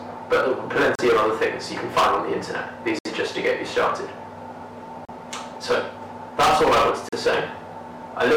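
Hard clipping runs throughout: the signal is driven about 18 dB beyond what a stage can pass, so peaks are cut flat, adding high harmonics heard as harsh fuzz on every loud sound.

Gaps between stream segments fall at 0.95, 2.99, 5.05 and 7.09 s, every 2 s. Mismatched segment time stamps leave holes of 34, 64, 34 and 38 ms filled with hard-edged silence, and no audio is lost.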